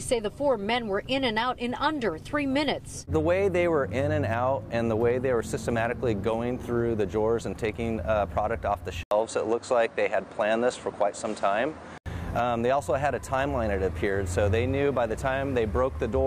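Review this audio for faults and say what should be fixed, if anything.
From 9.03 to 12.06 s the sound turns duller, with nothing above 9.5 kHz, after an 80 ms silence, and a faint new background noise appears at an unchanged level. This is likely an input switched to a poorer device; a filter or codec change would bring neither gap nor new noise. Locking the recording input and disabling automatic device switching would prevent it.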